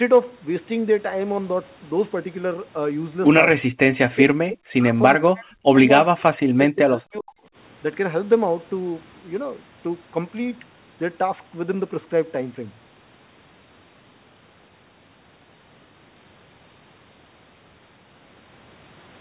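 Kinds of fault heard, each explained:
Speech suppressed in double talk: in three stretches between 4.06 and 7.42 s the speech sinks by around 40 dB and breaks into pieces, likely an echo canceller ducking the talker while both sides spoke at once; the affected parts add up to about 0.7, 0.4 and 1.0 s.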